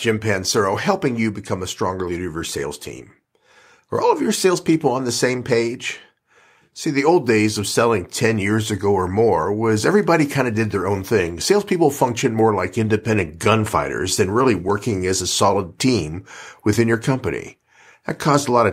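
Scattered short gaps appear from 12.89 to 13.59 s, just after "functioned more like": about four brief lost packets, each patched by extending the preceding sound. They cause brief ticks, with tiny repeated-cycle patches in the waveform.

A jitter buffer slow-down follows from 14.33 to 14.97 s, before "as a solid team". Repeated pitch periods add 38 ms, running at 95% speed with unchanged pitch. The spectrogram shows slightly stretched harmonics.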